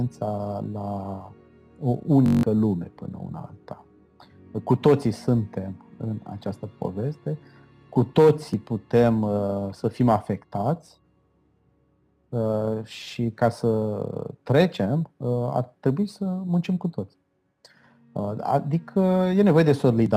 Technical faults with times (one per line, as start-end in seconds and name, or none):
2.26-2.43 system hang loop